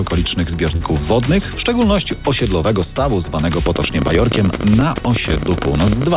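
At 0.76 s, running to about 0.82 s, there's a short concealed packet loss. Roughly 40 ms of audio didn't reach the decoder in time, and the receiver patched the gap by carrying the preceding sound forward and then blending back into the real signal. You hear it as a quick smear or wobble rather than a clean dropout. It sits on a call path that's already band-limited, with nothing above 4 kHz, which fits G.711 A-law at 64 kbps.

From 3.67 s to the end there's a train of clicks, about 15.6 per second, spaced irregularly rather than on a steady beat. The clicks have much the same shape and peak around 10 dB above the underlying sound, so they tick and pop right over it, and they're heard in the quieter gaps too. Something was injecting repeated pulses into the signal, likely electrical interference from nearby gear or a faulty connection or power supply.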